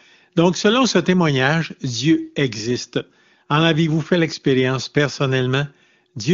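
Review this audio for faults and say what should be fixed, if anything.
Nothing to fix: no audible faults in the speech, which sounds like AMR wideband (HD Voice) coding at a high rate.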